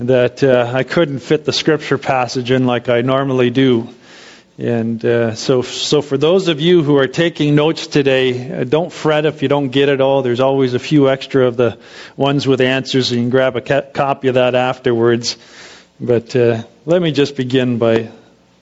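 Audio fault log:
throughout, gain pumping: gain is pulled down under loud sounds, swinging about 10 dB, likely from excessive mic gain driving a fast limiter.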